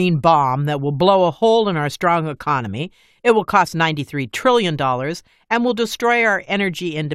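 No technical faults can be heard anywhere in the speech.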